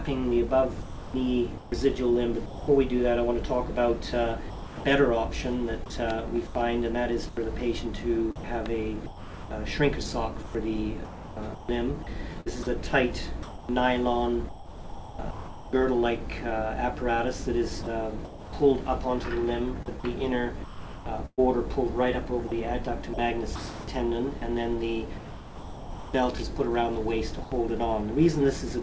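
The sender's voice detector likely switched on and off repeatedly across four stretches of this audio. It treated parts of the signal as background and stopped sending them, and the receiver filled those gaps with synthetic comfort noise. The result is sound chopped by the voice detector: quiet portions and edges break up. This happens from 0.82 to 2.68 s, with about 0.68 s replaced; from 4.50 to 15.73 s, with about 3.2 s replaced; from 17.83 to 18.53 s, with 0.32 s replaced; and from 19.86 to 26.14 s, with about 2 s replaced. Near the end, the detector likely cut transmission once more, producing sound dropped by the voice detector. From 27.44 to 27.52 s, 80 ms of audio is lost and comfort noise plays in its place, a brief hole before the signal returns. Throughout, the call path's codec leaves nothing above 8 kHz, which fits G.722.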